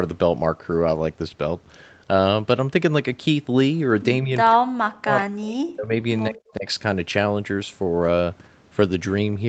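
Speech suppressed in double talk, likely an echo canceller ducking the talker during overlap: a slight dip at 4.22–4.31 s, then deep dropouts at 4.53–5.94 s and 6.29–6.66 s.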